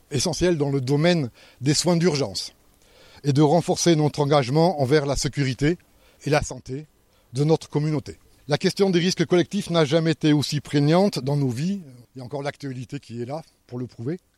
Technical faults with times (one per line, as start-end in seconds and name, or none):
6.38-6.84 one channel drops out
11.83-14.38 one channel drops out